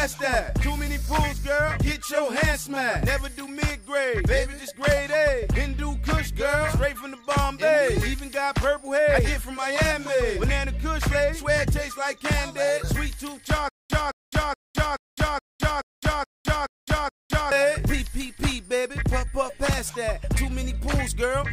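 From 13.69 to 17.52 s comes a stutter with silent gaps: a 215 ms fragment repeats nine times on an even 425 ms cycle, with 210 ms of digital silence between, likely a stalled stream replaying its last chunk. Unlike a seamless loop, true silence breaks each repeat.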